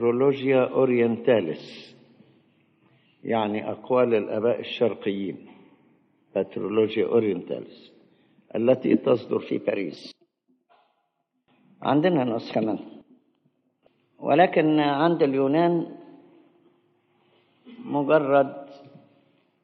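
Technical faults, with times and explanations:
9.40 to 19.63 s, wrong sample rate: partway through, the samples start being clocked out faster than they were captured, with no rate conversion. The ratio fits audio recorded at 44.1 kHz being played at 48 kHz. Every waveform period shrinks by the same factor, so the sound runs about 1.09 times faster and sits about 1.47 semitones higher. Speed and pitch rise together, giving a slightly hurried, brightened quality to the end of the clip.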